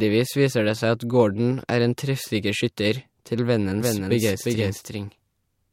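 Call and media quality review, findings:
Doubled audio track, 3.80 s to end, right after "skytter til". Full-band second copy trailing around 400 ms, a few dB quieter, no decay or room colour, abrupt onset. Likely a second capture via slower path or out-of-step edit.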